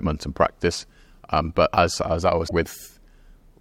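A short speech recording with one instance of damaged data in a compressed stream, from 2.44 to 2.51 s, right after "but as as I". For about 70 ms the sound breaks up. Corrupted bytes in the encoded file left the decoder unable to interpret those frames correctly, so it lost frame sync, then resumed once it locked onto the next valid frame header.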